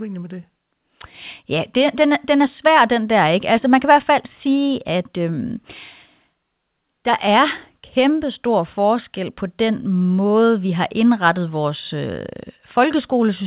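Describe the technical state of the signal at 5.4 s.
At 5.4 s the speech comes through intact, with no dropout, glitch or distortion, only the narrow call-path sound of a G.711 mu-law line with nothing above about 4 kHz.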